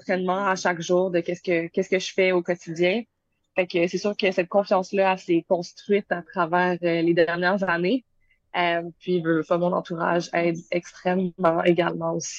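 The audio has a drift correction step from 7.90 to 8.89 s. Speed and pitch rise together by 5.2%, about 88 cents, almost a semitone. Then both snap back. This is likely clock-matching software briefly changing the playback rate to correct its buffer level.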